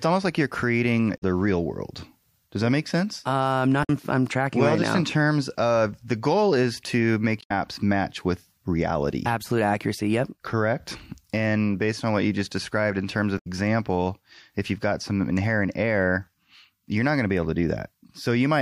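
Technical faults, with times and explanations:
1.14–1.23 s, 3.80–3.89 s (before "I'm tracking"), 7.38–7.51 s, 13.35–13.47 s: damaged data in a compressed stream. Brief glitches of about 0.1 s interrupt the speech, where corrupted frames are misdecoded and the decoder resyncs.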